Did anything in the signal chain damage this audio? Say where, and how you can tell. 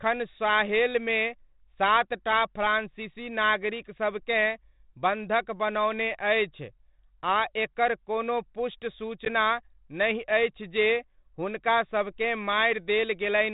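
Yes. A hard-edged 10 ms gap at 9.25 s, then briefly distorted speech: network packet loss on an ADPCM call, about one packet, throwing the decoder's predictor out of step.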